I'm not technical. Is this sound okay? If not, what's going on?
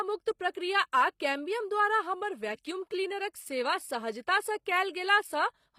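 No, it isn't quite clean. Two things are going on.

The whole clip has clearly audible compression damage, most likely from HE-AAC compression. This kind of format keeps only the lower part of the sound properly and then fakes the treble by copying lower bits upward and roughly shaping them. So the crisp top end you hear isn't the original, and nothing at all comes through above about 15.5 kHz. That rebuilt treble is where the damage shows up.

There's also a pre-echo at about 0.51 to 0.55 s, just before "आ कैम्बियम द्वारा हमर". The compressor works on short chunks of sound and spreads its noise across each whole chunk. When a sudden loud start lands near the end of a chunk, that noise leaks into the quiet moment just before it. You get a brief hiss of about 39 ms ahead of the sound, and the start itself comes across soft or smeared.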